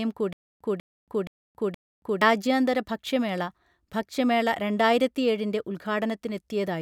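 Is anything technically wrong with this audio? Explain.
Yes, there's a stutter with silent gaps from 0.33 to 2.22 s. A 195 ms chunk of speech plays four times, each time followed by 277 ms of dead silence. That's likely a stalled stream replaying its last fragment on each retry, so the real audio there is lost.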